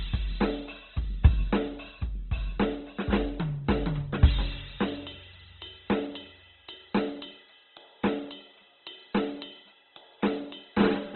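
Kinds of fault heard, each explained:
Opus compression: music stops dead above 4.2 kHz, with grainy, rough tones rather than MP3-style swirl, likely Opus music mode starved near 12 kbps.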